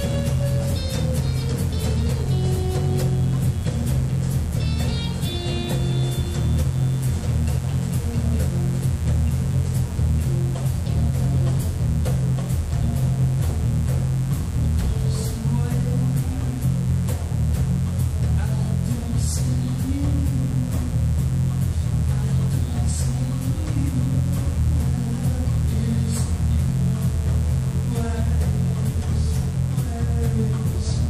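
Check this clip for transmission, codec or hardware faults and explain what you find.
A mains buzz runs under the audio for the whole clip, sitting roughly 20 dB below the wanted signal. It is locked to a 60 Hz supply. Something like a dimmer, a rectifier or an unshielded run is coupling sharp switching spikes into the path twice per mains cycle. Those spikes carry a dense series of 60 Hz harmonics reaching into the kilohertz range, so it is heard as a constant, raspy buzz rather than a smooth low hum.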